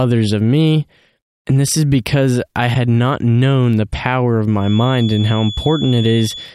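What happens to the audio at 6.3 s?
Feedback whistle from 4.55 s to the end: a thin 3.4 kHz tone that slowly swells and fades, well under the speech, likely from a loudspeaker-to-microphone loop held right at the feedback point.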